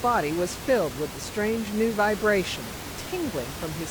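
No technical faults are audible.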